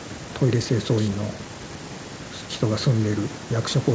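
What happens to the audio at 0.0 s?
At 0.0 s, and for the whole clip, there is echo with no canceller: the far end's loudspeaker feeds its microphone and nothing removes it. The speech returns about 150 ms later, roughly 29 dB down, as a faint, thin shadow.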